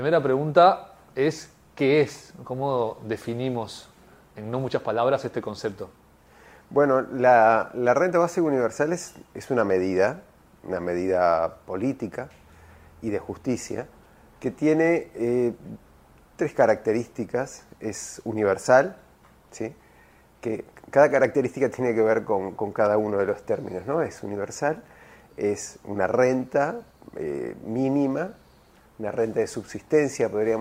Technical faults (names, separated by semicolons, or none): none